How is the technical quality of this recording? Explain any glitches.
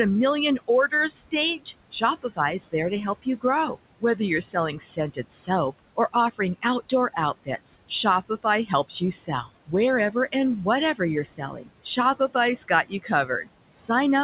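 The recording has two related faults, both from the noise suppressor.

Noise suppressor artifacts run through the whole clip. The suppressor pulls down bands it judges to be steady noise by about 20 dB, frame by frame, so the room noise, roughly 16 dB below the speech, drops away between phrases and returns beneath them.

Speech cut by the noise suppressor occurs from 0.58 to 10.34 s and again from 10.95 to 14.23 s. The suppressor mistook parts of the speech for noise and attenuated them, by up to about 21 dB in the first stretch (about a second and a half in total) and about 17 dB in the second. Soft consonants and word endings sound swallowed or faint. The band-limited sound, with nothing above 4 kHz, fits a G.711 call path.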